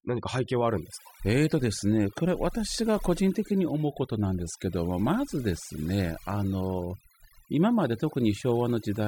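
Overdone noise removal runs throughout this speech clip: an overly aggressive noise reducer gates bands near its noise estimate, leaving a lowered, twinkling background.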